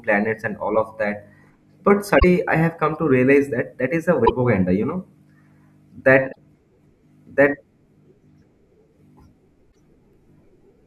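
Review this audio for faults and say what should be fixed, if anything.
Damaged data in a compressed stream breaks this speech four times. It happens at 2.16–2.24 s, just before "I have come to". It recurs at 4.22–4.30 s, between "that is a" and "you know", then at 6.28–6.37 s and 9.68–9.76 s. Each glitch lasts about 80 ms. Corrupted bytes make the decoder misread frames and lose sync until it finds the next header. That produces a short chirp or blip. Fix it by re-fetching from an intact source and verifying the file with checksums.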